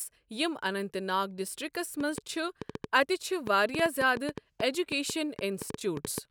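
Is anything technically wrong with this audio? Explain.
Yes. A train of clicks runs from 2.00 to 6.19 s, around twenty similar pulses at about 5.5 per second with uneven spacing, likely from electrical interference or a faulty connection. They tick sharply over the speech and through its pauses, peaking about 10 dB above it.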